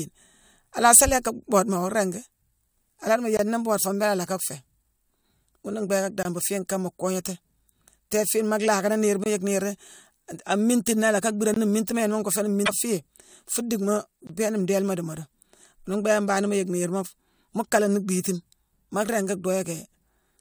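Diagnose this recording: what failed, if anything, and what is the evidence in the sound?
Block of digital silence: five dropouts, at 3.37–3.39 s (just before "nii mboode foo mbééla"), 6.23–6.25 s, 9.24–9.26 s (just after "fiine maa lhaakani niirma"), 11.54–11.56 s and 14.27–14.29 s. Each is a 21 ms hole in the speech. These are driver or buffer underruns. Each time, the playback or capture path failed to fill one output buffer in time, and zeros went out instead. The identical length fits a 1024-sample buffer.

Damaged data in a compressed stream: at 12.63–12.69 s, right after "ngoo fééni", a brief glitch disrupts the speech for about 60 ms. This is a codec-stage fault arising from corrupted bytes in the compressed stream, whether in storage or in transit. The decoder could not parse the affected frames, lost sync and produced garbage until it locked onto the next valid frame header.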